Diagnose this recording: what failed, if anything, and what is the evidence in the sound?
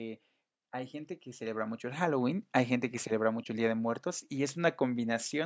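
Automatic gain rising in call processing: from 0.57 to 2.37 s the gain control ramps up about 5 dB, lifting background with speech, unlike louder talking.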